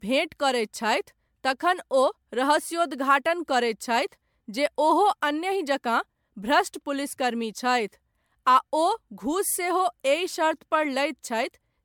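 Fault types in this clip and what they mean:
Generation loss: Speech sounds swirly, smeared and hollow. Attacks blur, and nothing sits above 19.9 kHz. Likely about ten MP3 re-encodes, fitting 128 kbit/s.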